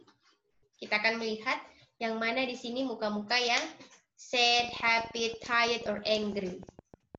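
From 4.60 to 7.16 s, a train of clicks ticks unevenly at 13.3 per second, roughly as loud as the sound. Likely electrical interference.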